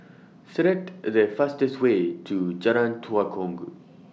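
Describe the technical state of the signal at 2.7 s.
At 2.7 s the speech signal is intact, with no dropout, clipping, distortion or other audible fault at that point.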